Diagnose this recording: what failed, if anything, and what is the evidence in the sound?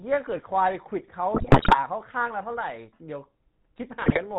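The speech has passed through the GSM full-rate codec at the codec stage. The damage is plainly audible for the whole clip. The voice carries a buzzy, gravelly roughness and nothing above 4 kHz. That fits a 13 kbps GSM full-rate stream. The codec models the vocal tract as a filter. It excites that filter with regularly spaced pulses that keep only every third excitation sample. That coarse excitation produces the grit.

GSM bit errors strike twice, in the network stage. The first burst runs from 1.34 to 1.79 s. The second runs from 4.02 to 4.19 s. In both the voice breaks into squawks, pops and gargling. Corrupted filter, pitch or gain values reached the decoder. Each bad frame bends the spectrum or spikes the level. The first burst sounds more severe, pointing to an error rate of several percent on a weak radio link.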